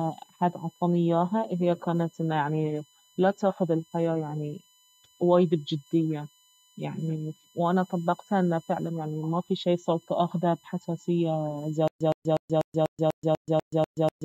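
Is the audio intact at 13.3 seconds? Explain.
No. From 11.88 s to the end, there is a stutter with silent gaps: a 117 ms fragment repeats every 246 ms with about 129 ms of digital silence between, likely a stalled stream replaying its last buffer. A USB whine also runs throughout: a fixed 1 kHz tone from bus-frame current leaking into power or ground, strongest at its 3 kHz harmonic, roughly 35 dB below the signal.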